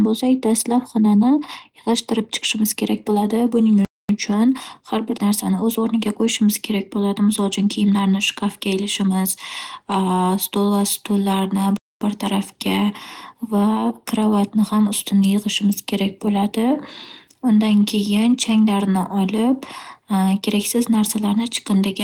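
Speech, with two playback stalls: the sound drops to silence mid-flow from 3.85 to 4.09 s and from 11.77 to 12.01 s, roughly a quarter-second each, likely from the player running out of data. Unlike a click or brief dropout, each gap is a sustained pause before the audio resumes.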